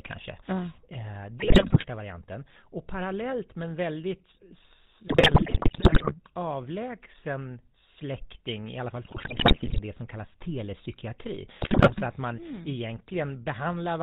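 Throughout the speech there is a buzzy, gravelly roughness, with nothing audible above 4 kHz, so sibilants are dull and the voice sounds boxed-in. This is GSM full-rate codec damage, and it is plainly audible. The codec models the vocal tract and excites it with a sparse, regularly spaced pulse train, discarding two of every three excitation samples. The result is the coarse buzz heard here, which fits a 13 kbps full-rate stream.

Four bursts of squawking, popping and gargling break through the voice, at 1.40–1.85 s, 5.08–6.19 s, 9.04–9.80 s and 11.62–12.01 s. The second is the longest and most broken. These are GSM bit errors. Corrupted bits in the received frames reach the decoder, so the filter, pitch and gain values come out wrong. The spectrum warps and the level jumps from frame to frame, which points to an error rate of several percent during each burst.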